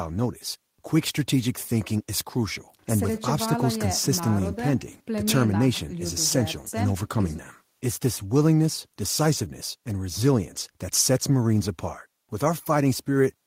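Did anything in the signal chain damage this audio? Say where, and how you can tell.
No, nothing damaged this audio.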